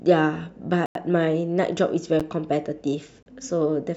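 At 0.86 to 0.95 s, 2.20 s and 3.23 to 3.26 s the speech drops into blocks of digital silence lasting 93, 10 and 35 ms, consistent with the output buffer not being filled in time (the first fits a 4096-sample buffer). Each gap starts and ends with an abrupt cut; the two longer ones are heard as brief holes, the 10 ms one as a tick or dip. On a waveform these appear as flat near-silent stretches, and on a spectrogram as empty vertical stripes.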